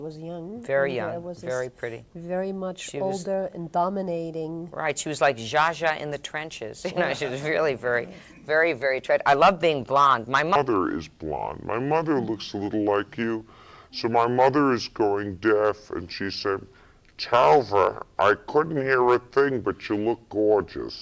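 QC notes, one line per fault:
10.56–21.02 s: wrong sample rate. From 10.56 s to the end, the audio runs at 0.667 times its proper speed and sits about 7 semitones lower, with tempo and pitch dropping together by the same ratio. That coupling shows the samples are being clocked out slower than they were captured, with no resampling in between. A two-thirds ratio fits material recorded at 24 kHz being played back at 16 kHz.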